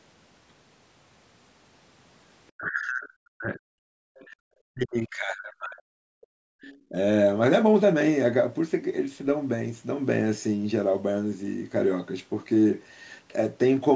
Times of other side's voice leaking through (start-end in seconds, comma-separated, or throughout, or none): 4.20-4.26, 6.62-6.77